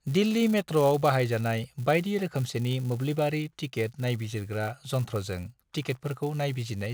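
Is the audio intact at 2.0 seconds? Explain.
No. At 2.0 seconds the speech carries a fault that runs through the whole clip: filter restarted on every block. The filter drops its memory and starts each block from silence. Each restart leaves a small tick. These repeat as a 200 Hz buzz that rises and falls with the speech level.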